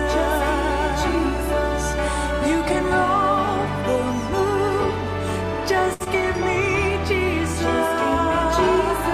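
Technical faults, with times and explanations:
5.93 to 6.02 s, short stall from a late packet: the sound is held too long for about 65 ms, with a slight buzzy sustain. A packet arrived late, the jitter buffer ran dry, and the receiver stretched the last sound until it came, then resumed without losing anything, leaving playback 65 ms later.
6.04 to 6.08 s, short concealed packet loss: a brief smear or wobble replaces 20 ms of audio. That stretch never reached the decoder in time, so the receiver extended the preceding sound to cover the hole and then blended back into the real signal.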